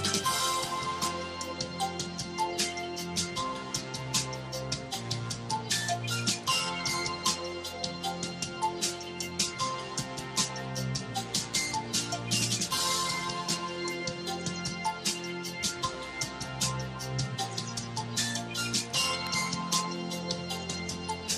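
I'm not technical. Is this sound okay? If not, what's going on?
No. There is one sharp snap at 19.27 seconds. It is an electrical switching spike. A nearby switch, motor or static spark likely made a tiny arc, and the audio line picked it up. It is brief and only moderately loud.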